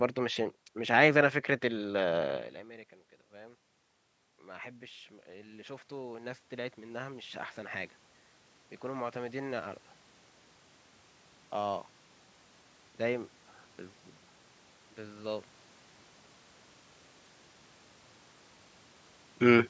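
From 3.3 to 9.85 s comes automatic gain rising: after the talker moves away around 2.5 s, the input drops about 21 dB, and the gain control gradually adds about 12 dB. Voice and room noise swell together, which a talker simply leaning closer would not cause.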